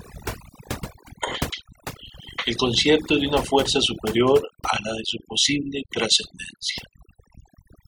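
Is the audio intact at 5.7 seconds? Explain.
No. Overdone noise removal runs throughout the clip, so at 5.7 s the noise reduction still cuts bands near its noise estimate, leaving a twinkling, warbling background.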